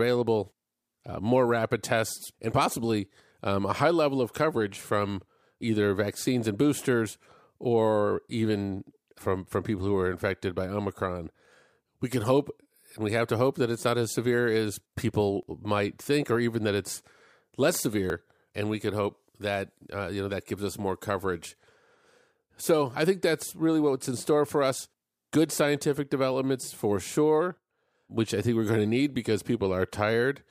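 At 4.54 s, between "a high level of" and "from either vaccines and", the speech jumps forward where about 10 ms of audio is missing, the likely result of a dropped buffer (overrun). The recording side did not read its samples in time, so that block was overwritten and the surrounding audio was spliced directly, with no gap of silence. The same skip recurs at 15.43 s, just before "might think or even", losing around 30 ms, and at 18.1 s after "even that it's less", losing about 10 ms.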